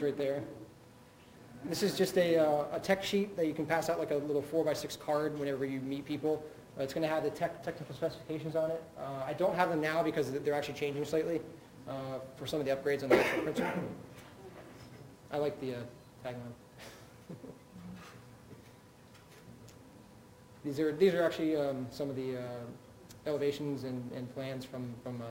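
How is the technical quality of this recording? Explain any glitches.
The recording has one fault that runs through all of it: imaging from sample-and-hold upsampling. Each sample was repeated without a smoothing filter, so mirrored spectral copies appear from 12 kHz upward, about 25 dB below the signal. This is heard as a metallic fizz that tracks the sound's level, and it points to an original 24 kHz rate.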